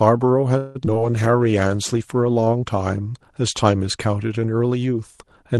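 At 0.57 s the speech stalls for about 0.2 s in a call audio freeze. The last sound is stretched into a fading, buzzy continuation instead of cutting to silence, and then the speech resumes exactly where it stopped. The pattern most likely comes from packets held up in transit until the jitter buffer drained. Because the receiver filled the wait and dropped nothing, the result is an inserted 178 ms pause with no lost material.

Short concealed packet loss follows twice, at 0.85 to 0.88 s and at 0.94 to 0.97 s. In the first, about 40 ms of audio never reached the decoder in time, and the late arrivals also let roughly 30 ms of the added delay drain back out. In the second, 20 ms went missing. Each time the receiver bridged only about 10 ms by extending the preceding sound before blending back into real audio, so each event is a brief smear or wobble, and a short consonant there can drop out.

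From 1.02 s to 5.01 s a call bitrate drop is audible. The Opus stream, which starts at 32 kbps with a 12 kHz audio bandwidth on the call path, falls to 15 kbps after the bandwidth estimate shrinks. With fewer bits the encoder quantises more coarsely, and the speech turns rougher and watery. The degradation is worst during the 1.12 s spent at the lowest rate, and it clears as the rate climbs back near the end.

Inside that span, from 1.32 s to 1.69 s, comes a jitter buffer slow-down. To rebuild its reserve, the receiver repeated single pitch periods and fragments of pause, adding 55 ms. Playback runs at about 87% speed with the pitch unchanged, so the syllables sound drawn out.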